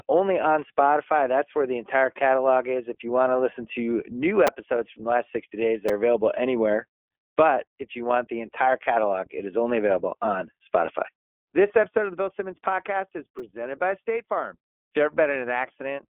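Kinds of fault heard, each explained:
iLBC codec: The speech went through iLBC, a narrowband VoIP codec that codes each frame's excitation independently. The texture fits its 15.2 kbps mode with 20 ms frames. The sound is held to a telephone band of roughly 300 Hz to 3.4 kHz, with nothing above 3.7 kHz, so sibilants lose their air and the tone is boxy. The coding damage is plainly audible throughout as a rough, slightly synthetic grain on the speech.
repeated buffer: At 4.47 s, 5.89 s and 13.39 s, new audio failed to reach the output in time, so the device replayed the last piece it held, two extra times in a row. The piece is tiny, which fits a 5 ms buffer. Each time the sound catches for an instant as a brief buzzy click with hard joins rather than an audible stutter, and about 10 ms of real audio is skipped past.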